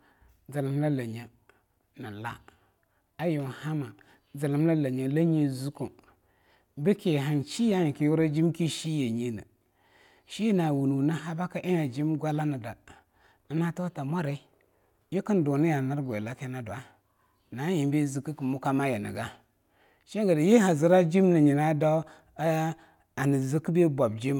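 No technical faults can be heard anywhere in the speech.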